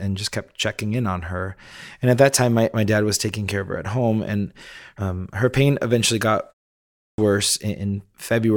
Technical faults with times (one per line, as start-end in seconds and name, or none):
6.82-7.18 clipped start after a pause